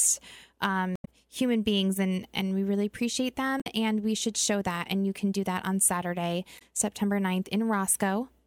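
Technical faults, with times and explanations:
0.93–1.07 s, 3.57–3.66 s and 6.55–6.62 s: damaged data in a compressed stream. Corrupted bytes make the decoder misread frames and lose sync until it finds the next header, giving short chirps, squawks, clicks or holes, seen as abrupt broadband smears on the spectrogram and jagged, discontinuous bursts in the waveform.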